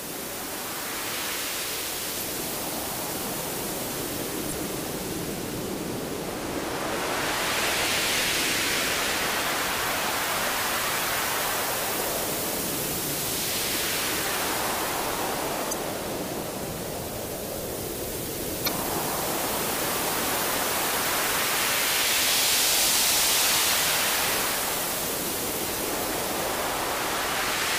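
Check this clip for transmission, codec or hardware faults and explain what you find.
Four short bursts of damaged data in a compressed stream occur, at 2.18–2.22 s, 4.48–4.53 s, 15.69–15.73 s and 18.64–18.69 s. Corrupt bytes make the decoder misread those frames and lose sync until the next header, producing brief chirps or squawks of about 40 ms each.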